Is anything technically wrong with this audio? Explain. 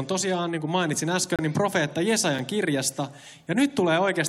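Yes. There are gaps between stream segments at 1.36–1.39 s (about 28 ms) and 2.39 s (about 6 ms). Mismatched segment timestamps leave holes filled with silence. Each sounds like a hard-edged dropout.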